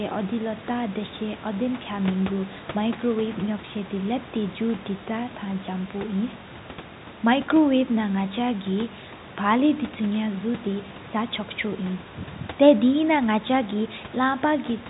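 The recording carries no audible technical faults.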